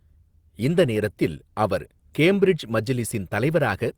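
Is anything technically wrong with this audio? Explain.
No, the speech signal shows no technical faults at any point.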